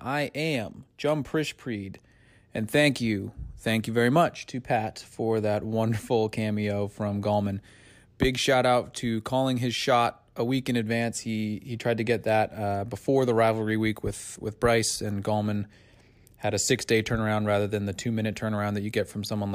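No technical faults can be heard anywhere in the recording.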